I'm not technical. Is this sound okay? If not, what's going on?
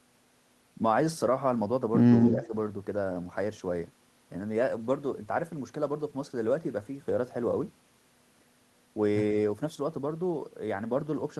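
No. Echo leak, 2.23 to 2.47 s: a slightly quieter repeat of the speech trails about 0.13 s behind, likely from a loudspeaker's sound leaking back into the microphone.

Speech suppressed in double talk, 2.34 to 2.53 s: the speech dips briefly, for about a fifth of a second, likely because the echo canceller turned down both overlapping sounds together.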